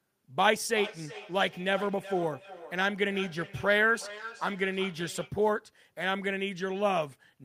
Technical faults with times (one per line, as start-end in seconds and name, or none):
0.74-5.38 feedback echo between two devices